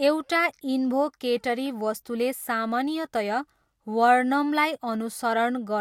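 No technical faults can be heard anywhere in the speech recording.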